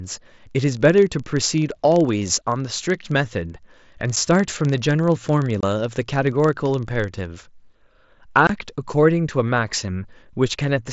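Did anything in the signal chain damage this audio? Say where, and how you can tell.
Yes. A block size mismatch (padded) sits at the driver or buffer stage from 0.0 to 7.28 s. The writing stage hands over blocks shorter than the reading stage expects, which fits a 1024-sample read, and the remainder of each block is filled with zeros. Each block therefore carries a brief gap, heard as a steady 23.4 Hz buzz under the speech. The audio runs slightly slow, at 0.999 times normal speed, with pitch essentially unchanged.

The Bluetooth headset link also shows unconcealed packet loss. Nothing hides the missing voice packets, so silence takes their place: a 7.5 ms hole at 4.16 s, then 22.5 ms holes at 5.61 to 5.63 s and at 8.47 to 8.50 s. Each dropout has abrupt edges that can click. The longer two sound like brief chops in the speech, about three packets' worth. The mSBC wideband codec carrying the link shows only light coding grain.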